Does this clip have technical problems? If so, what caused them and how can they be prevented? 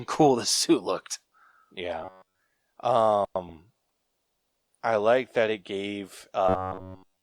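Yes. From 2.03 to 2.41 s, and again from 6.49 to 7.22 s, the speech turns into a stiff, metallic buzz near 94 Hz that only loosely follows the words. This is robotic sound from repeated short buffers. It is likely caused by new audio arriving too late, so playback keeps looping the last fragment of about 10.7 ms. That happens through most of the first stretch and all of the second. A larger jitter buffer and enough processing headroom prevent it.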